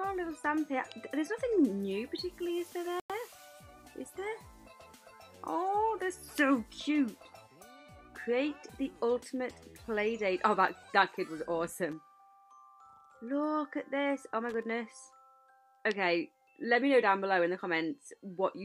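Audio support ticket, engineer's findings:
Dropout at 3.00–3.10 s. Sound cuts to dead silence for about 0.1 s, then resumes. Likely a Bluetooth stall: interference held up packets, the headphone buffer emptied, and playback waited on the resends. Short gap, clean restart, no crackle around it, so this looks like the wireless link rather than the hardware. Worth checking for 2.4 GHz congestion or distance to the source.

Two short bursts of irregular crackle, at 11.92–11.99 s and 14.49–14.63 s. Classic loose connector crackle: a worn or dirty contact making and breaking as it shifts, chopping the signal into scratchy fragments. Each burst is under a fifth of a second, which fits a cable or jack getting nudged. Suspect the plug or socket. Reseat it, clean the contacts, and swap the cable if it keeps happening.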